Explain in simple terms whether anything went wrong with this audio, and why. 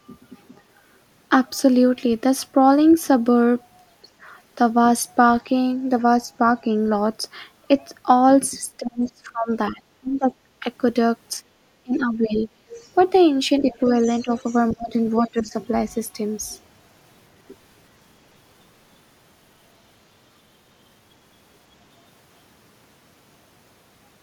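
Speech suppressed in double talk happens at 8.77–10.64 s, 11.53–12.48 s, 13.61–13.7 s and 14.23–15.54 s. The speech dips, nearly vanishing in the first stretch. This is likely because both sides talked at once and the echo canceller, unable to tell the talker from the loudspeaker, turned everything down.

The other side's voice is leaking through at 9.05–9.1 s, 12.69–13.04 s, 13.7–14.59 s and 15.19–15.3 s. A faint second voice slips in, in brief scraps and in one longer stretch, likely because the device's echo removal missed part of the loudspeaker sound reaching the microphone.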